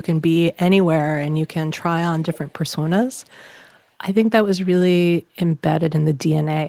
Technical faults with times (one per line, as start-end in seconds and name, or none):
2.18-2.53 echo leak
3.13-3.35 echo leak